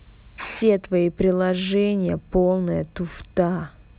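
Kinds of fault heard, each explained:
Aliasing: The speech was resampled from 16 kHz to 8 kHz without filtering, so energy above 4 kHz folds back down as gritty, unrelated tones. The folded energy sits well below the speech, roughly 25 dB down.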